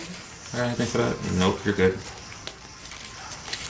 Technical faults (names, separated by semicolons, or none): none